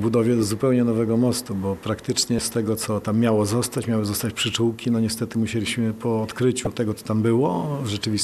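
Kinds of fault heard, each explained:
Damaged data in a compressed stream: at 6.64 to 6.67 s, corrupted bytes make the decoder misread frames and lose sync, producing a brief glitch.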